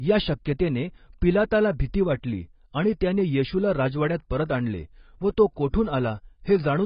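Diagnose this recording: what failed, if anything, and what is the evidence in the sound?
The fault sits at the codec stage and runs the full length of the speech. Nothing is present above 5 kHz, so sibilants lose their edge and the sound is dull, with a smeared, warbling texture on sustained vowels and fizzy residue around consonants. The damage is heavy throughout. That pattern points to AAC compression, likely AAC-LC at a very low rate near 16 kbps, where the encoder drops the top band and leaves coarse, patchy quantisation below it.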